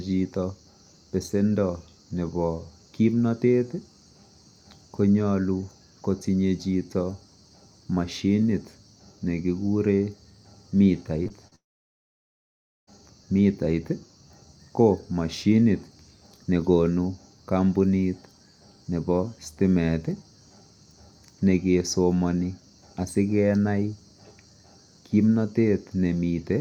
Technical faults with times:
11.23-11.53 short concealed packet loss
11.55-12.89 long network dropout

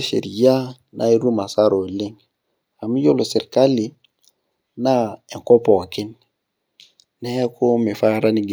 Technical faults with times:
none

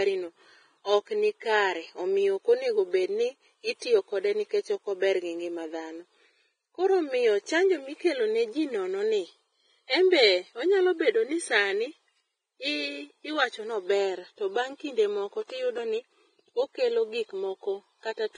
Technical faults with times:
0.00-18.38 Vorbis compression

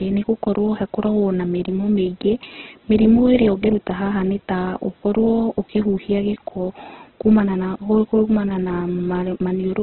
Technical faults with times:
0.00-9.82 Opus compression

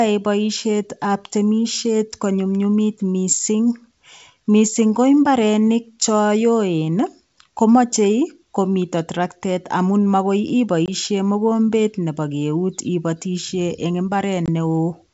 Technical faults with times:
10.86-10.89 packet loss on an ADPCM call
14.46-14.49 packet loss on an ADPCM call

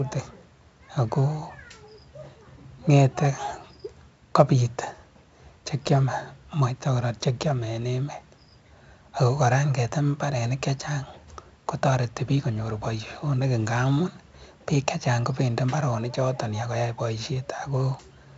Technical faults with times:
0.00-18.38 4-bit ADPCM compression

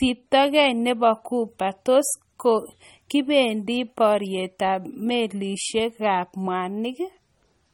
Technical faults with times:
0.00-7.73 low-bitrate audio saved at a high bitrate

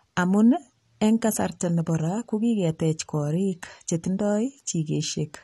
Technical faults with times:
0.00-5.43 AAC compression

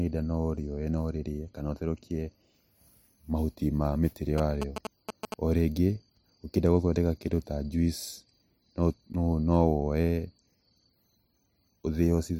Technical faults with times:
4.38-5.34 GSM signalling bursts

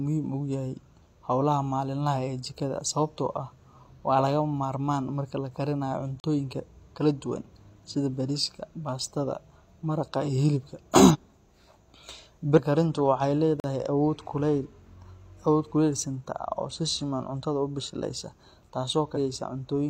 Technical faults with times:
6.20-6.24 block of digital silence
11.10-11.16 compressed frames skipped
12.54-12.59 compressed frames skipped
13.60-13.64 block of digital silence
19.12-19.18 compressed frames skipped

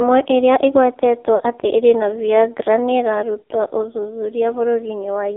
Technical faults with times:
0.00-5.37 AMR narrowband mobile codec
1.36-1.55 lost AMR speech frames

